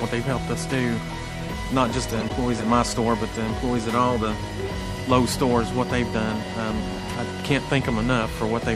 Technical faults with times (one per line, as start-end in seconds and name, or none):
0.00-8.75 MP3 compression
2.09-2.30 corrupt frame decoded
3.32-3.37 corrupt frame decoded